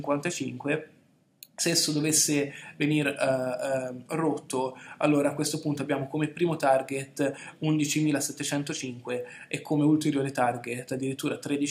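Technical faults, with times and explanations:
No technical faults detected anywhere in the audio.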